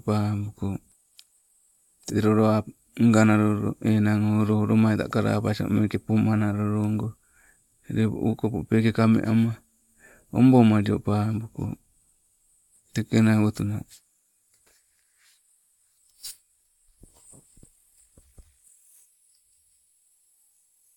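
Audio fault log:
No audible faults detected.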